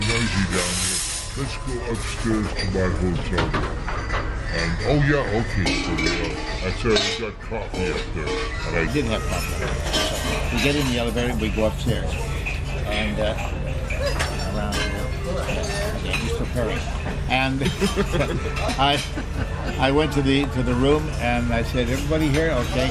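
Wrong sample rate from 0.00 to 8.88 s: the audio plays at about 0.73 times its proper speed, pitch dropped by about 5.5 semitones, consistent with 44.1 kHz material clocked out at 32 kHz without conversion, so everything sounds lower and dragged.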